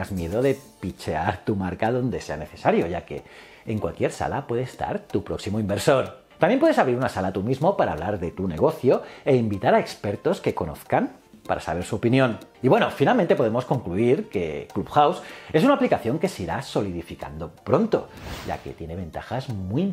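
Listening through the audio, nothing stood out as a technical problem at any point.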